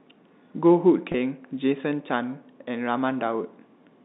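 At 1.12 s, a packet loss with pitch repetition breaks into the speech, lasting until about 1.14 s. About 20 ms of audio went missing, which fits a single lost packet. The receiver filled the hole by repeating the last pitch period. The gap is short, so nothing fades to silence. Instead the sound briefly holds, with a slight buzzy, sustained quality, then carries on. The G.711 telephone band, roughly 200 Hz to 3.7 kHz, frames the repair.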